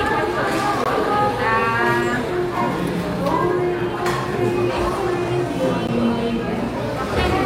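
A recording of sounds, broken twice by a gap between stream segments: a hard-edged hole of silence at 0.84 s lasting about 18 ms, and another at 5.87 s lasting 14 ms. Segment timestamps that don't quite meet leave the player to pad the space with silence. Unlike a dropout, nothing is missing: the sound resumes exactly where it stopped, with the timeline pushed later. The 1.0 s segment length fixes where such seams can fall.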